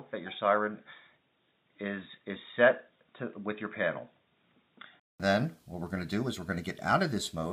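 From 0 to 5.20 s the audio is dull and boxy, with nothing above 3.8 kHz. The likely cause is an input switched to a poorer device. Its added noise sits far below the signal. At 5.20 s, a 200 ms silence precedes the full band returning at a similar level.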